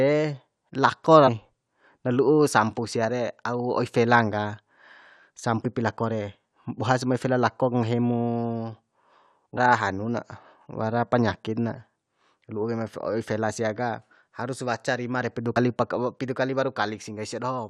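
Short glitches break into the speech at 1.27 to 1.29 s, 5.64 to 5.66 s, 9.57 s, and 15.56 to 15.58 s just after "waca rima re pidu". They come from damaged data in a compressed stream: the decoder misreads corrupted frames, loses sync and hunts for the next frame header.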